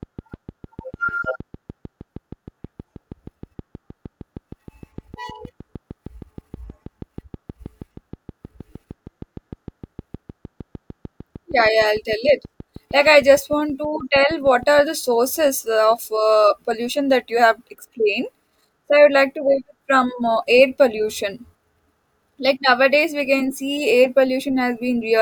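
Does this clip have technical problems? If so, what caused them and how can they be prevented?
Yes. A regular train of clicks runs from 0.03 s to 14.80 s at about 6.4 per second, roughly a hundred uniform pulses peaking near speech level and audible in pauses, likely interference from nearby equipment or a faulty connection or power supply. Prevent it by separating cables from noisy gear and checking connections and the power supply.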